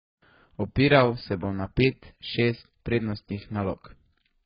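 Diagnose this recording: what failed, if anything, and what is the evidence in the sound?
The codec stage is where this went wrong, and it's the whole clip, start to finish. The speech stops dead at about 5.3 kHz, so the sibilants come out dull and smeared, and what's left up top has that warbly, fizzy texture. That pattern is likely AAC compression, and it fits AAC-LC squeezed down to something around 12 kbps: the encoder drops the high band entirely and quantises the rest so coarsely that the spectrum breaks up.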